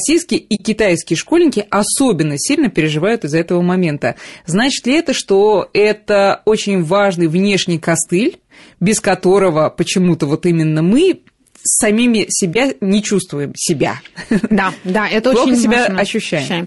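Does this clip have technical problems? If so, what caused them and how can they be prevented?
Yes. Throughout, the speech sounds rough and grainy, with a noisy haze between the voice's harmonics and a thin, synthetic-sounding top end. This is likely low-delay AAC compression (AAC-ELD): its short frames resolve pitch poorly, and the damage fits a bitrate around 32 kbps. Raising the bitrate or using a longer-frame codec where delay allows would prevent it.

The sound also drops out in a soft-edged hole from 0.55 to 0.60 s and a brief dip from 12.53 to 12.56 s. This is AAC frame loss with muting: the decoder zeroed the missing frames, and the overlapping windows faded the sound out and back in. The gaps fit two lost frames and then one. A more reliable network path or packet-loss concealment would prevent it.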